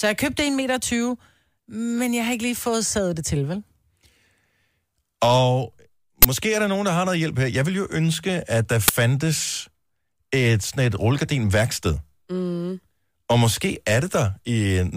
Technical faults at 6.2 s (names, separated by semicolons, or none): uninitialised buffer